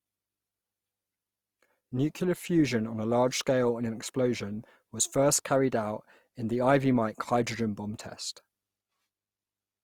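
Throughout the clip the speech has likely passed through Opus compression, with the encoder in its CELT music mode at full bandwidth and short of bits. The roughness points to a rate near 24 kbps. Instead of carving holes in the spectrum, the codec keeps each band's energy and fills starved bands by folding lower content upward or inserting noise. The damage is plainly audible: voiced tones sound grainy, rough and noisy rather than swirling.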